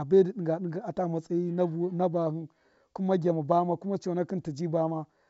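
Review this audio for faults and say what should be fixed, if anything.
No faults turn up in this audio, so nothing needs to be fixed.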